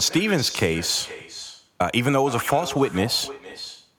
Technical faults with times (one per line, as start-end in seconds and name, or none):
0.00-3.98 echo with no canceller